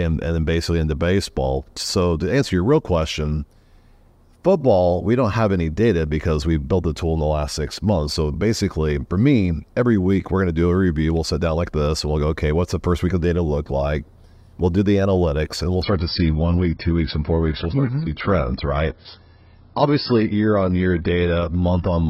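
A speech recording that drops to a lower bitrate at 15.82 s and stays there to the end. It is an adaptive stream switching to a lower bitrate. The treble suddenly vanishes above 5.6 kHz and codec artefacts rise. There is no gap. The change fits a step from AAC-LC at 96 kbit/s down to 16 kbit/s.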